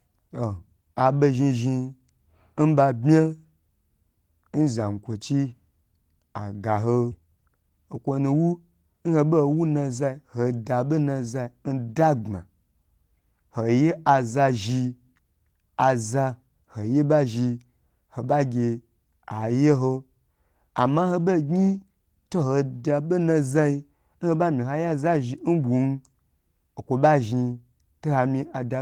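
At 7.11 s the speech skips ahead: about a second of audio is discarded and playback leaps straight to later material with no silent gap. Unlike a dropout, nothing goes quiet; the two sides are simply butted together, so the sound abruptly lurches forward.

From 7.21 s to 8.95 s a jitter buffer speed-up follows, running at 111% as the receiver trims short pitch-period slices to shed excess delay, roughly a fifth of a second in total. The speech sounds hurried, but the pitch stays put, which separates it from a simple faster playback.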